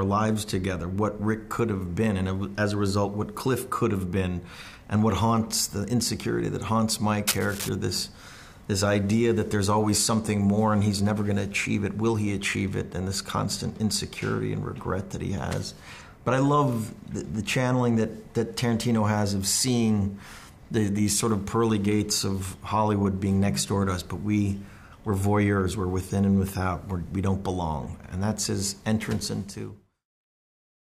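Cable scratch noise runs from 7.27 to 7.69 s, a dense, uneven rustle fairly loud against the sound, likely from a worn connector being moved, unlike steady hiss or isolated clicks.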